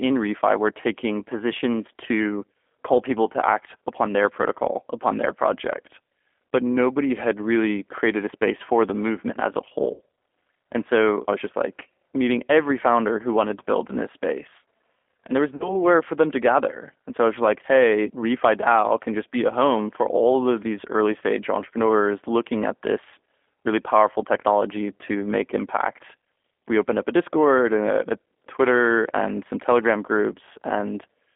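Throughout, the speech carries G.729 codec damage: a rough, synthetic texture confined to roughly 250 Hz to 3.5 kHz. Plain band-limiting would sound muffled but smooth, not gritty.

VoIP packet loss concealed by the speech codec occurs after "the movement as a" at 9.94 to 10.00 s, where about 60 ms is lost, and after "there was" at 15.56 to 15.75 s, before "for them to gather", where 40 ms is lost. The decoder stretches the last pitch and filter into a fading buzzy tone or coloured noise rather than leaving a silent dropout, and the voice stays weakened briefly afterwards.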